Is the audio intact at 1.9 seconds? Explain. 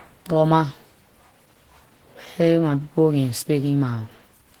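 No. At 1.9 seconds, as throughout the clip, the speech sounds muffled, hoarse and grainy. This is likely Opus compression in its hybrid speech mode, which fits a low bitrate near 16 kbps. The encoder fills starved bands with folded or noise-like energy instead of detail.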